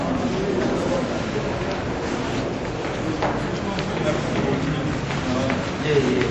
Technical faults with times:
0.00-6.30 MP3 compression

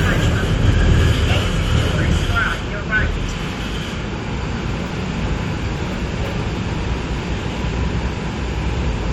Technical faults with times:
1.13 compressed frames skipped
3.31 compressed frames skipped
4.89 compressed frames skipped
6.17 compressed frames skipped

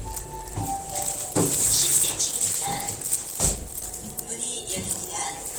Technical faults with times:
0.00-5.58 Opus compression

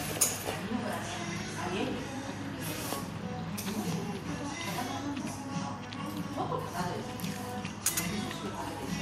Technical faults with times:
none

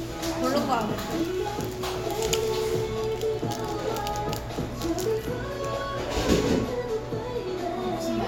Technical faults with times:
none

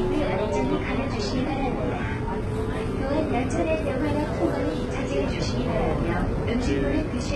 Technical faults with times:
0.00-7.35 HE-AAC compression

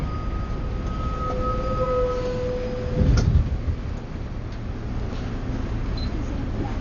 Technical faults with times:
0.00-6.80 Dolby Digital compression

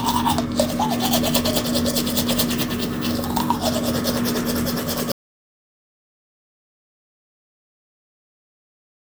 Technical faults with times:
5.12-9.02 audio dropout to silence

